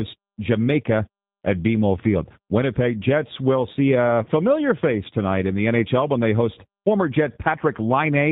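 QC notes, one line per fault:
Throughout: G.729 codec. The speech is rebuilt from a vocal tract filter, a pitch predictor and a few pulses per frame, so it sounds slightly rough and synthetic, with a character that fits a low-rate 8 kbit/s coder. Nothing passes above 4 kHz. On a spectrogram, energy stops flat at that line, and harmonics look smeared and slightly irregular, with a grainy, pulse-like texture in voiced stretches.
4.23 to 4.29 s: VoIP packet loss concealed by the speech codec. About 30 ms of audio went missing, which fits a single lost packet. The decoder filled the gap by repeating its last pitch and filter at falling gain, so the sound is stretched out and dims. Because each frame builds on the one before, the speech stays weak or distorted for tens of milliseconds after the gap. The waveform shows a shrinking stretch.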